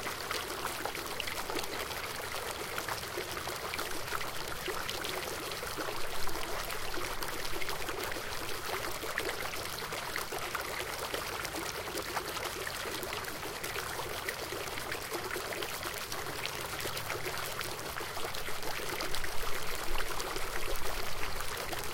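From 0.13 s to 21.91 s the audio carries word clock ticks: a steady train of clicks about every 40 ms, roughly 25 per second and several hundred in total. The receiving device is running on its own clock rather than locking to the digital source, with a mismatch on the order of several hundred ppm. Each time the two clocks slip by one sample, a sample is dropped or repeated, leaving a small discontinuity that is heard as a tick.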